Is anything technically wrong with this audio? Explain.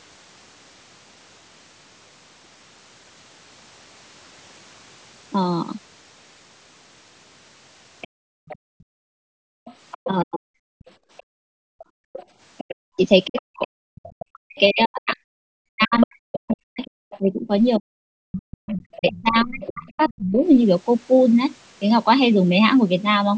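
Yes. The clip is speech from a call, and its echo canceller is struggling with loudspeaker playback.

The other side's voice leaking through is heard from 8.01 to 14.26 s, 15.8 to 17.19 s and 18.67 to 20.17 s. The likely cause is a canceller that failed to subtract the loudspeaker sound picked up by the microphone. The leaked voice sits roughly 20 dB below the talker, and nearer 10 dB below in the middle stretch.

The background is gated by the echo canceller from 8.08 to 9.65 s and from 10.97 to 12.13 s. While the loudspeaker plays, the microphone is pulled down by about 38 dB and about 37 dB. The room sound vanishes for around 1.5 seconds the first time and around a second the second time, then returns.

Speech is suppressed in double talk from 10.07 to 10.53 s and from 12.71 to 20.37 s. Both sides talk at once, and the likely cause is a canceller that cannot tell the talker from the echo. 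The talker's voice drops by roughly 40 dB and cuts out in pieces. In the longer stretch that adds up to about five seconds.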